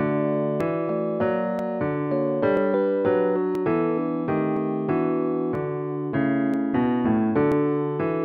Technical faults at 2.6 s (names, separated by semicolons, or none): overlap between stream segments